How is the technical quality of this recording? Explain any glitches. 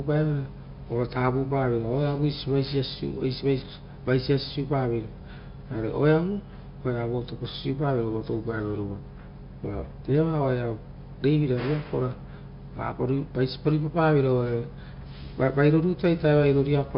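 No technical faults can be heard anywhere in the recording; the signal stays continuous and intact throughout.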